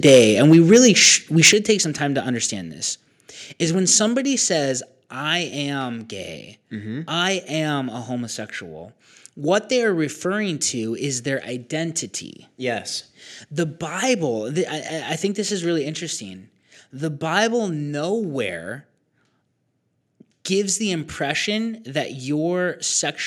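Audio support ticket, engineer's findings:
Microphone overload, 0.05 to 1.08 s: harsh crackle on the loudest syllables, peaks driven about 4 dB past the converter's limit, with a small share of samples flattened. Likely cause: mic input gain set too high, so the converter squares off the waveform tops. Again at 1.44 to 1.49 s, about 6 dB over, with a larger share clipped. The distortion tracks loudness and vanishes on quieter syllables, unlike codec grit, which is present throughout.

Microphone volume stepped down at 0.53 s: abrupt level drop of about 3 dB mid-overload, affecting voice and background equally. Likely cause: call software auto-reducing the device input gain after detecting clipping. Again at 1.53 s, about 7 dB, straight after the 1.44 s peak. These are single-step drops that hold the new level, not the smooth pumping and recovery of a compressor or AGC.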